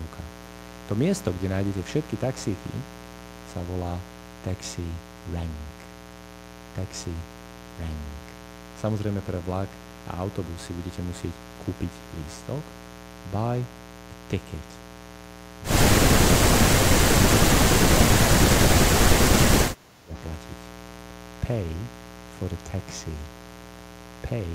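A steady, raspy mains buzz runs throughout: 60 Hz switching spikes add harmonics to several kHz, seen as evenly spaced horizontal spectrogram lines, only around 10 dB under the speech. From 19.64 to 20.14 s the speech sinks by roughly 20 dB, its waveform visibly squeezed, likely speech suppressed in double talk as the echo canceller ducked both talkers.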